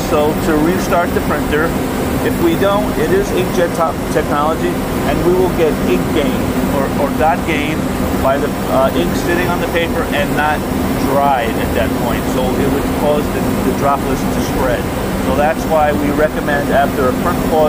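At 2.42, 10.39, 12.38 and 14.36 s there are tiny forward skips rather than gaps. This is overlap between stream segments: adjacent segments of about 2.0 s carried overlapping time stamps, so the player trimmed 5 to 19 milliseconds of sound that was never duplicated, and the waveform jumps where the pieces join. Unlike a dropout, nothing falls silent. The spacing is a whole multiple of the segment length, pointing to segment boundaries.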